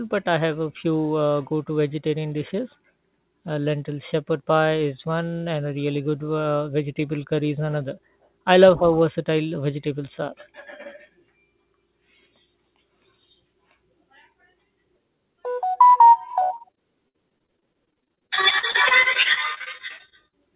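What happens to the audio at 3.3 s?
Nothing goes wrong at 3.3 s; the speech passes through intact there, with the call path's usual narrowband character and nothing above 4 kHz.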